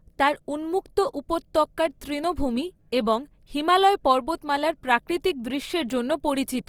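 From start to end, the speech carries plainly audible grain. It sounds rough and noisy rather than swirly. The spectrum stays full, reaching about 20.2 kHz. This is likely Opus compression in its music mode, at a rate that fits about 24 kbps.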